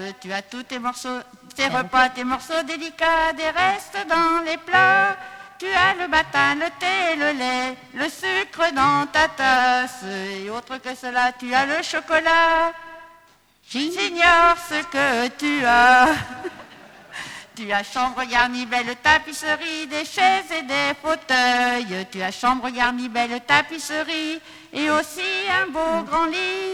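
Periodic clock jitter runs through the whole clip. The converter's sampling clock is being shaken at around 1 kHz, so every component carries sidebands about 1 kHz above and below it. Unlike random jitter's broadband hiss, this gives a tonal, metallic roughness that grows on higher content and tracks the sound itself.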